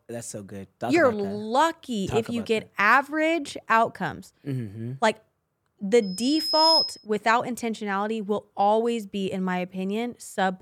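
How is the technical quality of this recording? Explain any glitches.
The recording has one clear fault, a loudspeaker feedback squeal. From 6.02 to 7.06 s, a thin, piercing tone at 5.1 kHz swells over roughly three-quarters of a second until it sits a few dB above the speech. The microphone was re-amplifying its own loudspeaker, and at that frequency the loop gain exceeded one, so the tone kept feeding itself.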